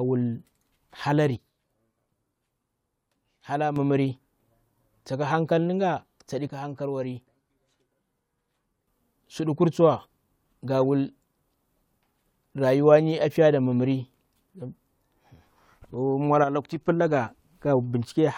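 One channel drops out at 1.36–3.76 s, 6.47–8.87 s (after "tsaka halka nigna", before "suɗu kur") and 16.44–16.88 s in this speech clip: the level falls abruptly by about 6 dB, likely because one stereo side cut out and the mono sum kept only half the shared signal.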